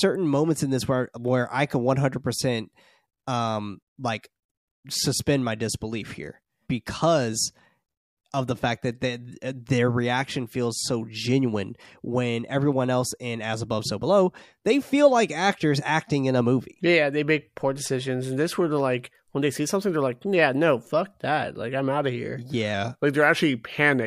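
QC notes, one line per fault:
22.74–24.07 s, drift correction step: right after "I'm out of here" the speech slows by about 5.5% and drops roughly 98 cents, close to a full semitone, with speed and pitch moving together and holding lower to the end of the clip. The abrupt, uniform detuning is likely a clock-matching resampler changing its playback rate in one jump to rebalance its buffer, rather than a gradual correction.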